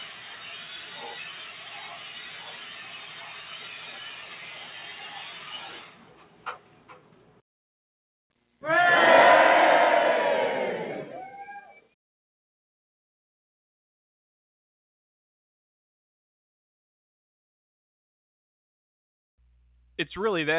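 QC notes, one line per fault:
Throughout: noise suppressor applied to music or sounds. A suppressor built for speech treats sustained tones and decaying tails as noise. It pulls them down by around 10 dB. Attacks get through, but held parts sink, so the sound pumps and thins.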